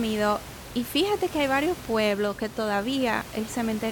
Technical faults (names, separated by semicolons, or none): none